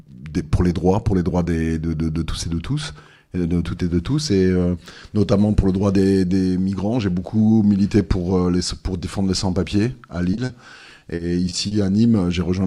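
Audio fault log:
10.31, 10.35 and 10.45 to 10.51 s: short concealed packet loss. Gaps of 20, 20 and 40 ms were bridged by extending the preceding sound, leaving isolated brief smears rather than sustained choppiness.
10.99 to 11.73 s: repeated packet loss (robotic sound). Holes of up to 40 ms recur across the stretch, with about a sixth of it patched, so the stacked continuations give a choppy texture with pieces missing instead of single ticks.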